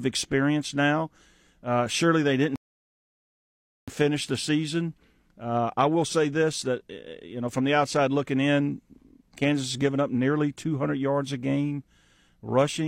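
At 2.56 s, right after "surely they didn't", the speech drops into silence. This is a rebuffering stall. The player ran dry of downloaded audio and waited. At 3.88 s it resumes exactly where it stopped, with "finish the season I". Nothing is lost, but about 1.3 s is added.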